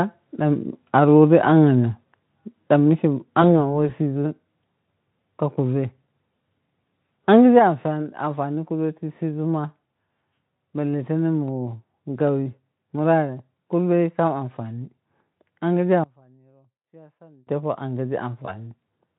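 VoIP packet loss concealed by the speech codec hits this speech clip twice: at 3.42 to 3.70 s, just after "da mike", and again at 18.46 to 18.53 s. Each gap fits a single lost 20 ms frame. The decoder filled it by extending its last pitch and spectral shape at falling gain, so the sound is briefly stretched into a fading buzzy tone or coloured noise. Because each decoded frame feeds the next, the distortion outlasts the gap itself, for almost 0.3 s at the first point and about 80 ms at the second. At 7.59 s the whole signal, speech and background alike, drops abruptly by about 4 dB and stays lower. The likely cause is the microphone volume being stepped down by the call software, which cut the device's input gain in a single move rather than fading it. From 16.04 to 17.47 s the level collapses by about 26 dB and only a faint residue remains. That points to one channel being inverted: with one side's polarity reversed, everything common to both channels cancels when they are summed to mono, so the centred speech nearly disappears and only the small differences between the two sides are left.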